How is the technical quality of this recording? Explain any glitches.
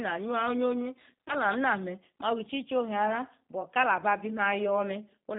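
The recording has clearly audible low-bitrate codec damage throughout and one brief dropout-and-repair glitch.

G.729 codec: Across the whole clip the speech is band-limited to telephone width, with nothing above 4 kHz. It sounds rough and slightly synthetic, which points to G.729A at about 8 kbit/s. The codec rebuilds each short frame from a vocal-tract filter, a pitch predictor and a handful of pulses, so fine detail is lost. Unlike plain low-pass filtering, the roughness comes from this sparse resynthesis, not just missing highs.

VoIP packet loss concealed by the speech codec: From 1.25 to 1.35 s, just before "na me ma", about 50 ms of audio went missing in gaps scattered over 100 ms, with no gap longer than 20 ms. The decoder filled each gap by extending its last pitch and filter settings at falling gain. This gives a brief stretched, fading patch that stays weak for a moment after the audio returns. 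A plain dropout would be silence or a click instead.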